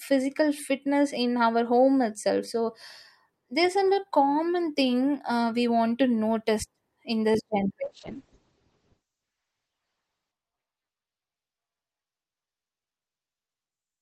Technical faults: call bitrate drop

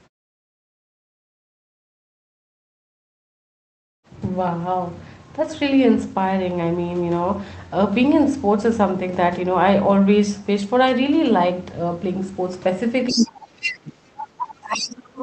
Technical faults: other side's voice leaking through; speech suppressed in double talk

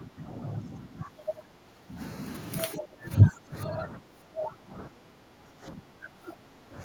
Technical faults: speech suppressed in double talk

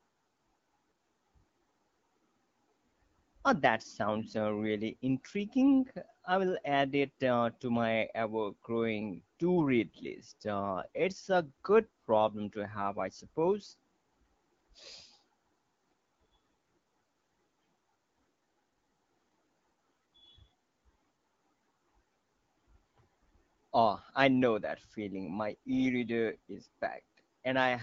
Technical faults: none

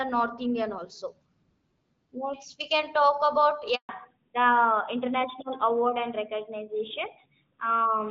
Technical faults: handover gap; fallback to narrowband

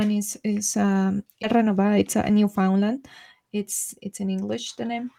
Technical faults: skip ahead; jitter buffer speed-up

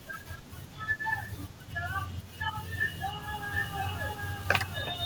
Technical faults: doubled audio track

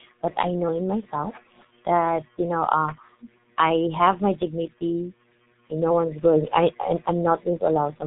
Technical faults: G.723.1 codec

